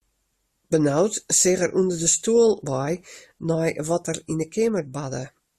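No technical faults can be heard anywhere in this speech recording.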